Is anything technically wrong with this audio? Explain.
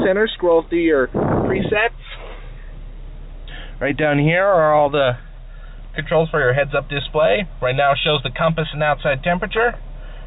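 No, nothing's technically wrong here; it simply sounds like it came over a phone-style call line, with nothing above about 4 kHz, which fits a narrowband codec like G.711 at 64 kbps.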